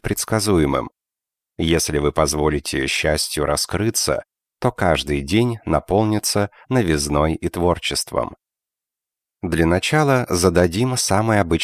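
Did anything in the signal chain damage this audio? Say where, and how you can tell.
No, nothing in the signal chain audibly damaged this audio.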